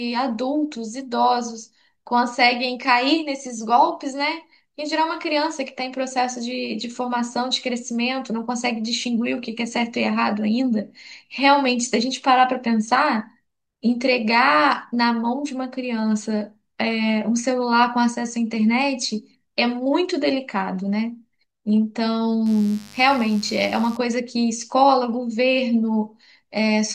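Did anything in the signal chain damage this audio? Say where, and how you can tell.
Yes. From 22.46 s to 23.97 s a mains buzz breaks into the speech: a raspy, steady tone built on 50 Hz, sitting roughly 25 dB below the speech. The stage is the analogue wiring. Sharp switching spikes, of the kind a dimmer, rectifier or unshielded run produces, are coupling into the line twice per mains cycle. That spreads energy across the 50 Hz harmonics well up into the kilohertz range, so the buzz has this edge instead of being a pure hum.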